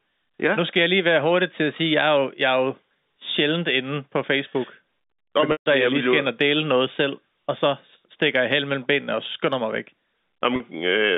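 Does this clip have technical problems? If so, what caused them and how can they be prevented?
Yes. At 5.52–5.66 s the speech locks into a held, buzzy tone that fades into silence before resuming with a short cross-fade, and at 10.56–10.60 s a briefer buzzy hold bridges the gap. This is packet loss with pitch repetition. Over the G.711 telephone line, 140 ms and then 40 ms of audio went missing, which fits lost 20 ms packets. The receiver filled each gap by repeating the last pitch period and fading it out. An adaptive jitter buffer with forward error correction on a less congested network path would prevent it.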